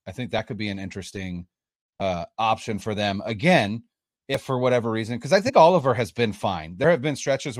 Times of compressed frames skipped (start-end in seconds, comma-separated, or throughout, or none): 2.00, 4.34-4.37, 5.46-5.50